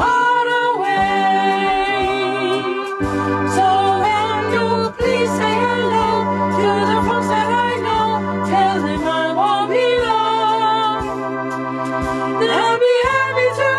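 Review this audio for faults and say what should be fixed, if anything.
Two short blips of damaged data in the compressed stream, at 4.00 to 4.04 s and 7.06 to 7.12 s, where the decoder misreads frames and loses sync. Checksum transfers and re-fetch from a clean source.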